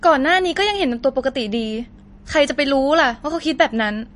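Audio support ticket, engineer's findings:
MP3 compression artefacts, whole clip. Speech swirly and watery, s sounds chirpy, nothing above 10.6 kHz. Likely low-bitrate MP3 encode, damage consistent with roughly 40 kbps: encoder cuts treble, drops weak frequency lines that flicker frame to frame.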